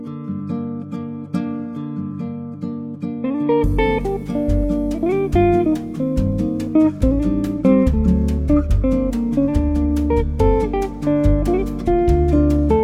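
From 0 to 4.0 s, an adaptive stream starting at a low bitrate gives thin, synthetic treble and stronger artefacts, then jumps without a gap to better sound extending to 18.2 kHz.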